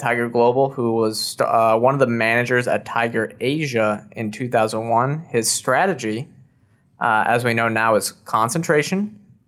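Throughout the speech, clock drift between sender and receiver is at work: the sender's audio clock runs roughly 2% slow, so the receiver's jitter buffer keeps draining. Small timing hiccups surface at uneven intervals across the whole clip as the buffer struggles to stay fed.

From 0.22 s to 9.04 s, repeated timing corrections follow from that drift: the receiver keeps repeating short pieces to stay in step, stretching playback to 98% speed and adding about 200 ms overall. The edits come across, if at all, as slight stutters and a subtly unsteady, dragging tempo.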